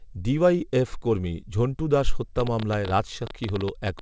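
Speech that's been through a call codec, with nothing above 8 kHz, which fits a wideband codec like G.722. The fault is a train of clicks from 2.40 s to the end of the clip: about 9.5 clicks a second, unevenly spaced, peaking around 10 dB above the speech, so they tick through over the talking and the gaps alike. Repeated pulses of much the same shape like that are likely interference from nearby equipment or a faulty connection or power supply.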